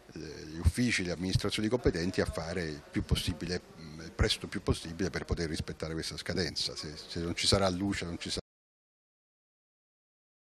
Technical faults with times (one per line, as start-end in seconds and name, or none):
8.40-10.47 audio dropout to silence